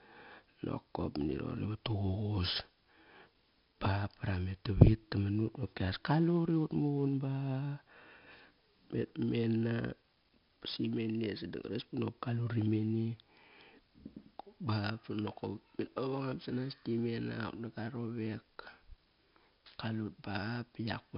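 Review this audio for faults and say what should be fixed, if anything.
4-bit ADPCM compression, throughout: coarse predicted steps leave heavy gritty hiss on loud speech, blurred attacks, and nothing above 5.3 kHz, consistent with a 44 kbps encode. Re-export from the original source as uncompressed PCM or a modern high-bitrate codec instead of low-rate ADPCM.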